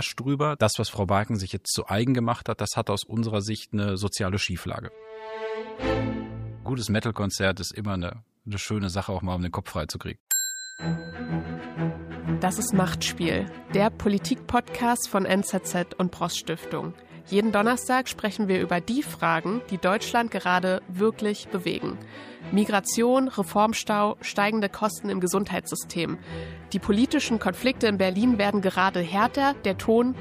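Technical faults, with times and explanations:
No technical faults can be heard anywhere in this audio.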